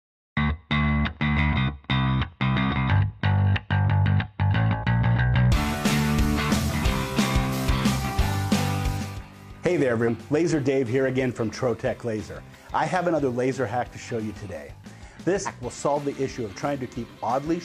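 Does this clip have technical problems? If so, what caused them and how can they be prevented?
Yes. Compressed frames are skipped at 1.49 s, 8.97 s, 10.03 s and 15.42 s. At each point whole frames of about 46.4 ms go unplayed, so the audio jumps ahead by about 150 to 200 ms, a span of a few frames. Each join is a short disturbance of about 50 ms. Preventing it means verifying file integrity after transfer and storage, and using error-protected transport, so no frames arrive missing or corrupted.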